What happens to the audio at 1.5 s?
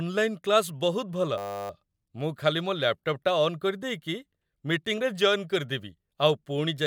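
The computer stalled while the sound hardware kept replaying one 10 ms stretch of its ring buffer, a system hang loop from 1.38 to 1.7 s. Those 32 exact repeats turn the speech into a steady 100 Hz buzz before it resumes with essentially nothing skipped.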